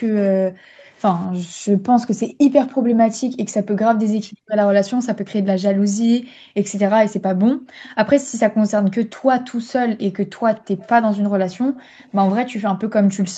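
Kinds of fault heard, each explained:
Background gated by the echo canceller: at 0.31–3.8 s, 5.13–9.27 s, 10.08–11.98 s and 12.73–12.93 s the room sound sinks by about 40 dB and then recovers, because the echo canceller clamps the microphone while far-end audio plays and releases it afterwards.
Echo leak: at 0.78–0.85 s, 7.83–7.95 s and 11.75–12.1 s a faint copy of the speech trails the original by about 251 ms, sitting roughly 30 dB or more below it. This is likely loudspeaker sound that the echo canceller failed to fully remove and that was sent back.
Speech suppressed in double talk: at 4.13–4.38 s the speech dips by around 40 dB for a fraction of a second. This is likely the echo canceller mistaking overlapping talk from both sides for echo and attenuating the near-end voice along with it.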